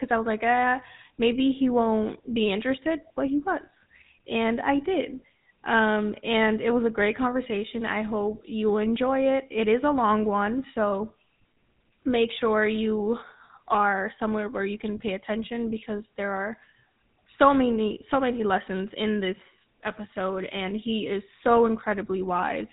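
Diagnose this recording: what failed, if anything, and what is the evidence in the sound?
The failure is at the codec stage: GSM full-rate coding, present for the whole clip. The speech has a buzzy, gravelly roughness from start to finish. Nothing survives above 4 kHz, so sibilants are dull and the top end is gone. This fits the 13 kbps full-rate codec. It replaces the real signal with a model of the vocal tract, excited by regularly spaced pulses, and keeps only a thinned-out excitation. That coarse pulse train is the grit you hear.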